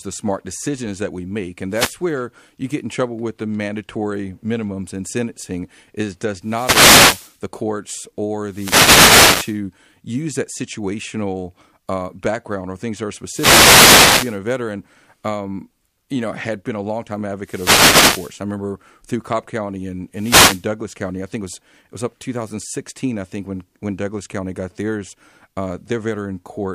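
Speech picked up through an analogue FM wireless microphone whose radio link repeatedly fades, producing six wireless microphone noise hits. As reflected signals cancel at the receiver, its noise climbs and is heard as a brief swish of static: at 1.70–1.96 s, 6.40–7.40 s, 8.48–9.60 s (after "the courts"), 13.24–14.39 s (before "veteran um you know"), 17.41–18.41 s (after "had been a longtime") and 20.14–20.67 s.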